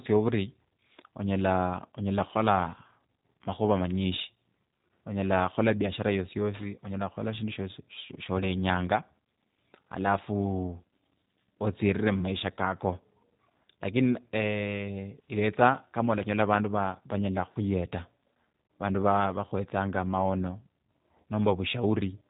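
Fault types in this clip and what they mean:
G.729 codec: a low-rate voice codec, likely around 8 kbit/s, rebuilds the speech from a few pulses per frame, cutting everything above 4 kHz and leaving it audibly rough and synthetic.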